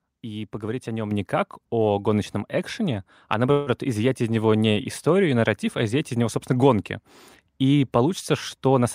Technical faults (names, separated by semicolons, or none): microphone volume stepped up; call audio freeze